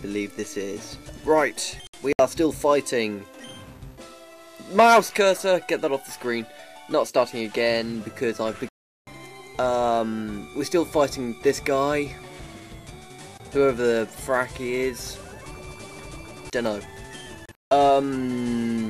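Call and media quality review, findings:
Digital broadcast dropout, three events. Short scattered holes at 1.87–2.20 s and 17.46–17.72 s. One unbroken gap at 8.69–9.08 s. Receiver mutes on missing or failed frames, and that audio is lost. Gap lengths fit 32 ms frames.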